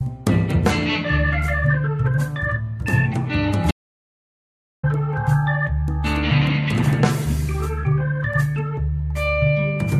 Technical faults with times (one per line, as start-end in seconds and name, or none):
3.71-4.83 audio dropout to silence